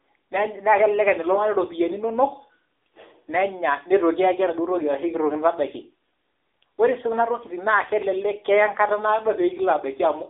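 From start to finish, the speech carries the sound of the AMR narrowband mobile codec, the AMR-NB coder used on 2G and 3G phone calls. The band is squeezed to roughly 200 Hz to 3.6 kHz. Nothing above 3.6 kHz survives, so sibilants lose their edge and the voice sounds thin and boxed in. The codec models the vocal tract and rebuilds it from sparse pulses. The damage is plainly audible: a buzzy, synthetic grain that fits a low bitrate near 8 kbps.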